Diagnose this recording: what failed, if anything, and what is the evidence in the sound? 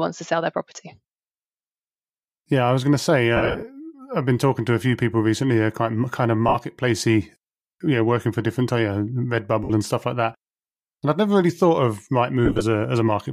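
The fault is lost LE Audio frames on the Bluetooth wireless link, with the LC3 decoder concealing the gaps. Short patches at 6.48 s and 9.64 s each last 60 ms. Longer broken stretches run from 3.36 to 3.62 s, with about 170 ms lost and the longest run near 70 ms, and from 12.45 to 12.62 s, with the longest run near 30 ms. The gap lengths fit 7.5 ms frames. Plain dropouts would leave clean silence. Here the decoder repeats the last spectrum with scrambled phase, so each gap becomes a grainy, noisy smear that fades rather than cutting dead. The faint breathiness around it is likely light LC3 compression.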